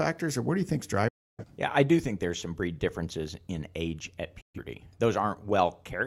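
The receiver stopped getting decodable frames and muted its output, a digital broadcast dropout. After "do you think is", at 1.08 s, the speech fades out over about 8 ms into silence until 1.45 s. A second hole follows "differences in age at", from 4.41 to 4.59 s. The gaps match roughly 0.3 s and 0.13 s of lost programme, fitting several whole frames each. The speech resumes with what was said in between missing.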